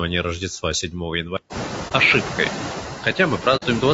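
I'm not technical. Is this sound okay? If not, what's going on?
No, not quite. Throughout, there are noise suppressor artifacts: a filter keeps pushing the background noise down between words and letting it back up under them. The room noise itself, which gets louder from about 1.5 s, is just the room. The speech also sounds rough and grainy all the way through, likely from low-delay AAC compression, the squeezing used for video calls. Finally, there's AAC frame loss with muting at about 1.88 s and again from 3.56 to 3.63 s. Small chunks went missing in transit, so the sound softly fades to a brief gap.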